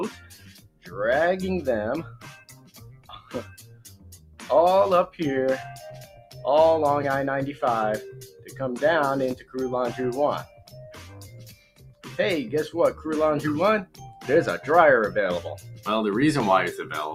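The level keeps breathing up and down by around 15 dB from start to finish, with held parts and decaying tails sinking while sharp onsets punch through, so the sound pumps and thins. That is a noise suppressor applied to music or sounds: a processor tuned for speech keeps treating steady tones and reverb as background noise and pulling them down, then releasing as each new attack arrives.

The sound is cut by the noise suppressor at eight points. The first is from 0.1 to 0.96 s, where it drops by about 19 dB. The longest dip runs from 2.02 to 4.49 s, falling about 17 dB. Shorter ones follow at 5.9 to 6.44 s (about 10 dB), 8.12 to 8.6 s (about 11 dB) and 9.35 to 9.55 s (about 13 dB). From 10.43 to 12.08 s it drops about 17 dB, then at 13.85 to 14.28 s about 15 dB, and at 15.57 to 15.87 s about 10 dB. Each time, sustained material fades or its decay is chopped short because the suppressor judged it noise and attenuated it harder than everything around it.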